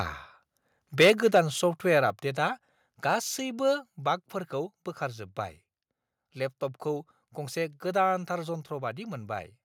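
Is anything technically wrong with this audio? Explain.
Yes. From 1.0 to 1.4 s the loudest peaks sound flattened and crackly. This is likely microphone overload, with input about 6 dB too hot and peak tops clipped.

At 1.1 s and 2.1 s the level drops abruptly, by about 2 dB and then about 4 dB. This is likely the microphone volume being stepped down automatically after clipping.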